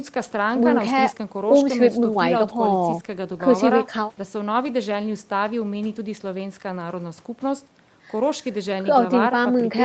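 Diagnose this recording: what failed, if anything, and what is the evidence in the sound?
Nothing stood out on listening to this speech recording, and the absence of content above about 8 kHz is simply what the call's microphone processing and Opus codec path would be expected to leave.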